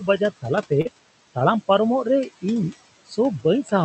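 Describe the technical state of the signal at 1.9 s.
At 1.9 s the background drops away and breaks up into twinkling specks. This is overdone noise removal, present throughout the clip: a noise reduction stage set too hard drives individual frequency bands down or off whenever they sit close to its noise estimate, taking quiet parts of the voice along with them.

A second fault, noise suppressor artifacts, also runs throughout and is heard at this moment as residual noise sinking between words and rising beneath them. The suppressor lowers bands it judges to be steady noise frame by frame, cutting that noise by about 18 dB, and the room noise underneath, sitting about 16 dB below the speech, is what gets pumped this way.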